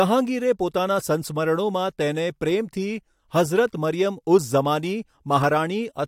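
No technical faults can be heard in this speech recording. There is no moment in the audio that calls for a time or a value to be pointed out.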